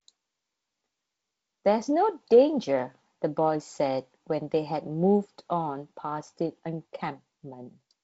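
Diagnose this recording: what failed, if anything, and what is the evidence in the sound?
Nothing failed: the speech has passed through G.722 wideband telephone coding, with content stopping near 7.7 kHz and a light grain of coding noise in keeping with the 48 kbit/s mode, which is how that path sounds when it is doing its job.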